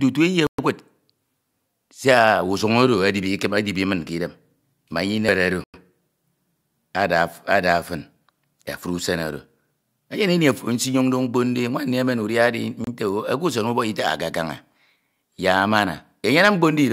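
A speech recording where the wireless link likely hit a Bluetooth stall three times, with delayed packets letting the headphone buffer run empty. The sound drops to silence at 0.47 s for 117 ms, at 5.64 s for 100 ms and at 12.84 s for 28 ms.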